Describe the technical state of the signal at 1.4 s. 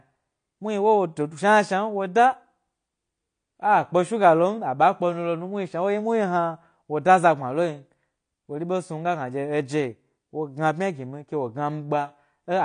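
At 1.4 s the speech carries AAC compression, present throughout the clip: nothing above about 9.8 kHz, with a smeared, warbling fizz on sibilants, likely from AAC-LC coding at a rate fitting 32 kbps. Unlike a plain low-pass filter, the damage extends below the cut-off.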